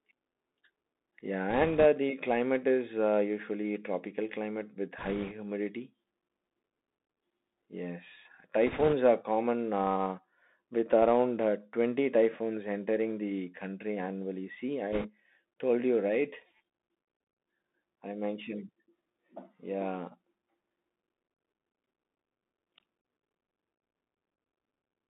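The speech passes throughout through a Bluetooth CVSD headset codec, confining it to roughly 200 Hz to 3.7 kHz. The one-bit delta coding leaves scratchy sibilants, strained loud peaks and a fine granular hiss. A spectrogram shows a hard ceiling near 3.7 kHz, with a grainy noise floor filling the band.

Bit errors on the Bluetooth voice link then appear in four short bursts. The first runs from 1.5 to 1.85 s, just before "the climate is uh". The second runs from 4.98 to 5.33 s, right after "usually tropical climate with". The third runs from 8.67 to 8.94 s. The fourth runs from 14.93 to 15.10 s, leading into "told you". At an error rate of a few percent, the flipped bits only nudge each step, so they give a rushing crackle rather than clicks. On a spectrogram this shows as broadband speckle, with no tall spikes in the waveform.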